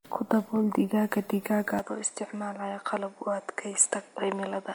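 From the start the speech sounds swirly and hollow, with smeared attacks, likely generation loss from repeated lossy encoding, maybe seven passes, consistent with 96 kbit/s MP3. At 1.79 s, with no gap, it turns duller and about 5 dB quieter, capped at 10.4 kHz, with a faint new hiss, likely the input switched to a poorer device.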